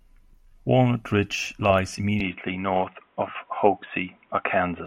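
At 2.20 s the speech abruptly turns dull and boxy and stays that way to the end. Everything above 3.8 kHz is gone, the level shifts by around 5 dB, and a faint new background hiss appears far below the speech. There is no gap at the change. This is likely an input switched to a poorer device, with the recording moving mid-take to a narrower-band microphone or headset path with its own tone, gain and noise.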